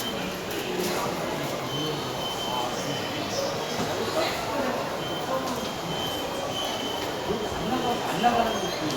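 An everyday sound recording with no technical fault to point to at any moment. Nothing in what can be heard calls for a time or a cause.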